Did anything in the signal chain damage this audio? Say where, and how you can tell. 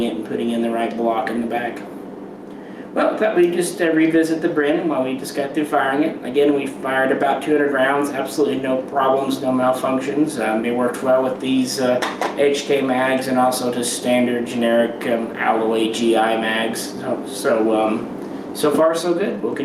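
Yes. Gain pumping runs through the whole clip. The gain ducks by about 5 dB under each loud sound. The dynamics sound squashed. The likely cause is input gain set far too high, with a fast limiter clamping every peak.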